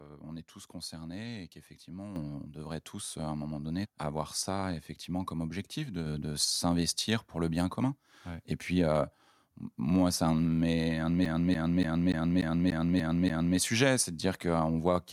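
Microphone volume stepped up at 2.16 s, right after "tous concernés et qu'effectivement", and again at 6.06 s, after "ça effectivement comme objectif". Each time the speech and the room background jump louder together in a single instant, by about 8 dB the first time and about 4 dB the second. The level never eases back. That points to the call software judging the input too quiet and raising the device's input gain in one step, mid-phrase, rather than anything changing at the source.

CD stuck on one turn from 11.25 to 13.58 s, beginning after "mes un de mes" and releasing into "sujets c'est de dire". The same 0.29 s slice of speech plays eight times in a row, with a brief mute at each jump, giving a fast, perfectly even stutter. This is the signature of a scratched disc throwing the laser back one track at the same spot on every rotation, until it finally clears and playback moves on.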